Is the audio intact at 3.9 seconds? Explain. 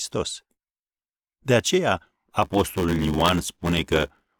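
No. From about 2.42 s to the end, there's a block size mismatch (padded). Each block read downstream, which fits 512 samples, gets only part-filled, with zeros plugging the rest. That puts a buzz near 94 Hz under the speech and slows it to about 0.86 speed with its timbre kept.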